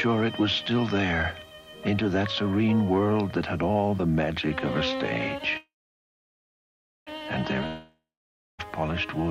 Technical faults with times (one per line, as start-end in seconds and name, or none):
5.57-7.09 call audio freeze
7.67-8.60 long network dropout